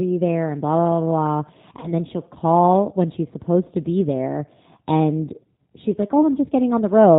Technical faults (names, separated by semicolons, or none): G.729 codec; VoIP packet loss concealed by the speech codec